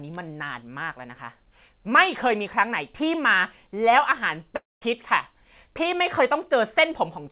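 At 4.56 s the speech cuts out until 4.83 s. The last sound stretches into a fading buzz that gives way to about 0.2 s of silence, and speech resumes with roughly 0.26 s skipped. This is likely a long network dropout. Unlike a brief packet-loss glitch, the concealment runs out and the missing audio never returns. The surrounding G.711 call audio stops at 4 kHz.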